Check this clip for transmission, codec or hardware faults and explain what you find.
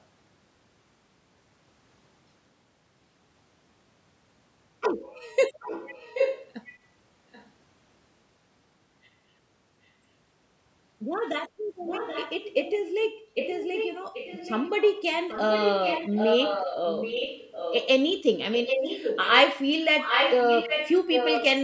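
One fault runs through the clip: echo leak. A delayed second copy of the speech trails the original by about 0.78 s. It appears at 5.6–6.49 s, 6.65–6.79 s, 7.32–7.5 s, 11.85–13.05 s, 13.38–15.02 s, 15.29–17.88 s, 18.52–19.43 s and 20.03–21.46 s. The brief scraps around 7 s sit far below the speech. From about 15 s the copy is nearly as loud as the speech, and in the last stretch it matches it. The likely cause is a loudspeaker on one end of the call whose echo canceller failed to remove what its microphone picked up, so that sound was sent back down the line.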